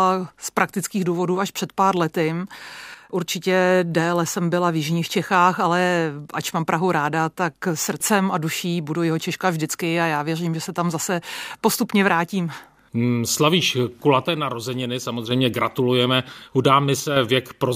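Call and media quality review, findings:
Speech level dips abruptly by about 6 dB, then recovers: 2.95–3.12 s, 14.25–15.31 s (longest, about 1.1 s), 17.00–17.16 s. Likely cause: one channel drops out upstream of the mono fold-down. Content shared by both channels loses half its contribution to the sum, hence the 6 dB step; anything carried only in the lost channel vanishes for the duration.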